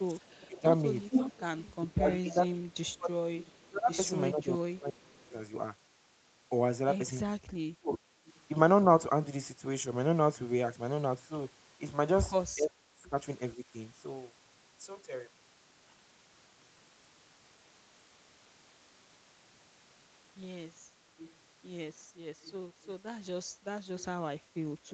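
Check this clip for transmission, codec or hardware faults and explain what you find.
Two faults recur in the speech: echo leak and speech suppressed in double talk. The sound stops above 8 kHz, which fits the Opus call path's bandwidth and is expected.

Echo leak, 0.21–3.6 s, 7.96–8.4 s and 21.19–24.93 s: a copy of the speech trails it by 416 ms. The copy is strong in the first stretch, only about 5 dB under the speech, and faint later, about 30 dB and 25 dB down. The likely cause is a far-end echo canceller that let loudspeaker pickup return down the line. A fixed delay this long separates it from room reverberation, which smears continuously rather than repeating.

Speech suppressed in double talk, 0.38–5.32 s, 7.29–7.92 s and 12.55–13.64 s: the talker's level drops in pieces. The drops total roughly three seconds in the first span, roughly a third of a second in the second and under a second in the third. 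They reach about 25 dB, and about 35 dB at 12.55 s. This is likely an echo canceller clamping down while both sides spoke. These are level reductions applied by processing, not lost packets, which distinguishes them from packet-loss dropouts.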